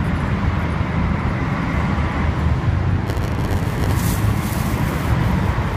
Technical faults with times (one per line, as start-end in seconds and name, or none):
3.05-3.92 block size mismatch (padded)